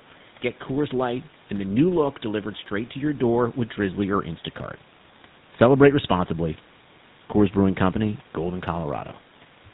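The whole clip has been through the GSM full-rate codec, and the damage is plainly audible. It rebuilds the speech from a vocal-tract model driven by sparse, regular pulses, so the speech comes out buzzy and gravelly. Everything above 4 kHz is gone, and the sound fits the old 13 kbit/s mode.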